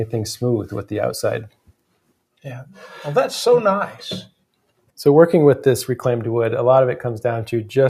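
From 1.49 s to 2.12 s the sound is cut by the noise suppressor, which treats it as noise and pulls it down, by about 18 dB at its deepest.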